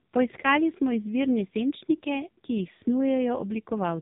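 Throughout, the speech carries the AMR narrowband mobile codec: cut off above 3.8 kHz, heavily buzzy and synthetic, pointing to a bitrate around 5 kbps.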